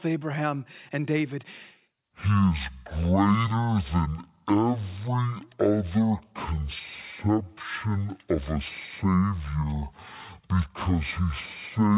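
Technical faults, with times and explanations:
2.04–11.97 s, wrong sample rate: the sound plays at half speed and 12 semitones lower, which fits 16 kHz samples played back at 8 kHz without conversion.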